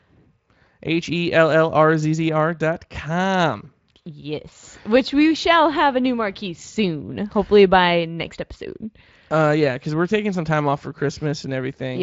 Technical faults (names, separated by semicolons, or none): none